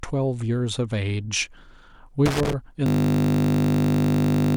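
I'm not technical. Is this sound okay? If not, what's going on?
No. At 2.26 s a loose connector crackle begins: a worn or dirty plug or socket kept losing and regaining contact, so the sound was chopped into a scratchy, irregular burst of crackling that lasts until about 2.53 s.

From 2.86 s to the end, there is a system hang loop. The computer froze while the sound hardware kept replaying the same tiny 20 ms slice of audio. Repeating 50 times a second, it turns into a steady buzz where the speech should continue.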